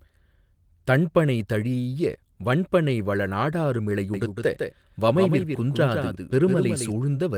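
A slower second path likely recaptures the speech from 4.14 to 6.92 s, a doubled audio track: a dry copy trails about 150 ms behind, somewhat quieter.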